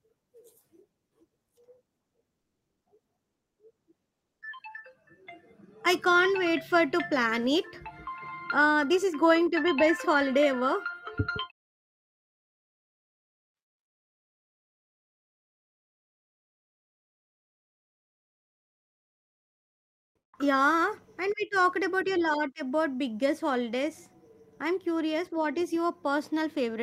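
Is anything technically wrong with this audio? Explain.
Yes, two faults.

Comfort noise in place of the background, 13.87 to 20.33 s: the real background gives way to steady, featureless noise about 24 dB quieter, likely because the sender paused transmission during silence.

Onset clipped by the voice detector, 20.22 s: the first 110 ms of returning speech is missing, likely because detection lagged, so the sound starts abruptly without its soft beginning.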